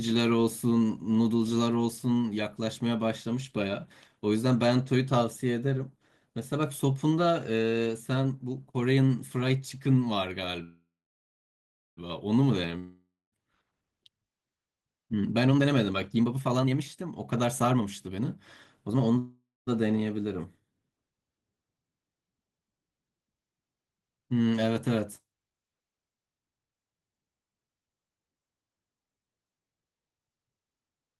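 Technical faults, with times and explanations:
10.63–11.99 s, call audio freeze: the speech stops and the last sound carries on as a fading buzz, which thins to silence for about 1.07 s of the 1.34 s hold. When the speech resumes it picks up exactly where it left off, so nothing is lost and the clip simply runs 1.34 s later from here. The likely cause is packets held up in transit until the jitter buffer emptied. That complete pickup is what separates a freeze from a dropout.
12.79–13.36 s, long network dropout: again the last sound is stretched into a fading buzz, with about 0.22 s of silence inside a fill of roughly 0.53 s, but this time the speech returns further along, with about 0.54 s of it gone. The likely cause is audio that never arrived at all. The skip forward on return, rather than a seamless continuation, marks it as a dropout and not a freeze.
15.13–18.37 s and 18.87–19.17 s, jitter buffer speed-up: after the delay built up, the receiver trims it by cutting many short pitch-period slices. 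The first stretch plays at 128% speed, removing around a second; the second at 164%, removing around a fifth of a second. Pitch stays the same, so the speech sounds hurried rather than chipmunk-like, and there is no gap or buzz as in the freezes.
19.18–19.69 s, call audio freeze: a shorter repeat, in which the last sound is held as a fading buzz for about 0.49 s, with about 0.22 s of it near silent, and the speech then continues with nothing missing but 0.49 s later. The likely cause is packets stalling once more.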